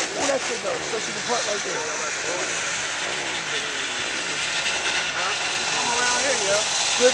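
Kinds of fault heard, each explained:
Dropped buffer (overrun): samples were likely overwritten before being read, so the audio jumps ahead, each losing about 20 ms, one nearer 70 ms.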